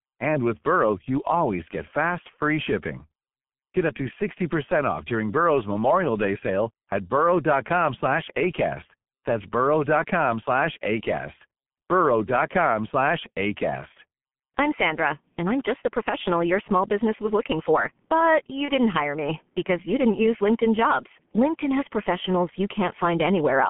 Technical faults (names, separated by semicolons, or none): G.723.1 codec; VoIP packet loss concealed by the speech codec